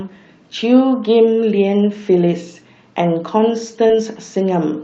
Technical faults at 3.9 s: short concealed packet loss; lost packet rebuilt from error correction

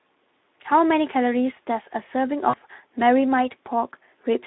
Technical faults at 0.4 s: Speex codec

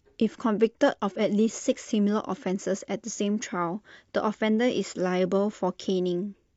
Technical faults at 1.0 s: none

